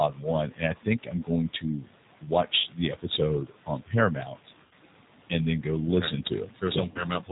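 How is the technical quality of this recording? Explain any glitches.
The recording is clearly degraded. The speech is narrowband, rough and slightly synthetic throughout, with a pumping, fluttery background, and there are three short dropouts.

The background noise sits about 15 dB below the speech. It sinks in the gaps between phrases and rises again under the speech, and the leftover noise has a warbling, fluttering texture. These are noise suppressor artifacts. A suppressor estimates the steady noise in each frequency band and lowers those bands frame by frame, here cutting the noise by about 17 dB. Its decisions change from frame to frame, so scattered bits of noise survive and flicker.

The voice is also dull, with nothing above 4 kHz, and it has a buzzy, synthetic edge. This points to the G.729 codec, running at a rate consistent with 8 kbit/s. G.729 doesn't store the waveform. It rebuilds speech from a vocal tract filter, a pitch predictor and a few pulses in each 5 ms subframe. 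That approximation is plainly audible here as roughness, and it also makes the background noise warble.

At 2.60–2.67 s, 4.65–4.74 s and 6.91–7.04 s the speech smears into a brief stretched sound that fades, then returns weak and distorted for a moment. This is VoIP packet loss concealed by the speech codec. About 40 ms of audio goes missing in the first and last gaps and about 60 ms in the second, which fits two or three lost 20 ms packets. During each gap the decoder extends the last pitch and filter while lowering the gain. Because each frame builds on the one before, the voice takes a little while to recover after packets arrive again.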